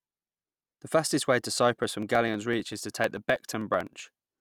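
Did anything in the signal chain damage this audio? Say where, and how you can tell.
Yes: periodic USB or driver dropouts at the driver stage. From 1.84 s (after "fastest way to") to 4.31 s, about forty tiny skips, roughly half a millisecond each, tick every 63.5 ms. The strict clock-like spacing points to a blocked driver rather than random clicks.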